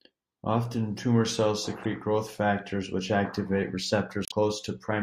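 A speech clip with two brief bursts of damaged data in a compressed stream. The first, from 1.83 to 1.85 s, falls between "tumor cells" and "growth factors which activate". The second runs from 4.24 to 4.32 s, after "growth factors which activate". Corrupt bytes make the decoder lose frame sync, so each is heard as a chirp, squawk, click or short hole.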